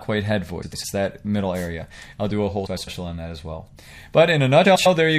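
The whole clip carries plainly audible MP3 compression. It sounds watery and swirly, and attacks smear. The likely cause is a low bitrate, around 64 kbps. With so few bits, the encoder drops weak frequency components. Those components then flicker on and off from one frame to the next. That flicker gives the swirling texture.

Frames out of order occur three times: 0.62 to 0.84 s, 2.66 to 2.88 s, and 4.65 to 4.87 s. Each time, two adjacent blocks of about 0.1 s swap places. Each block fits four MP3 frames. The stretch plays back second half first. It sounds like a short garbled flutter. No time is lost, so the timing after each event stays intact.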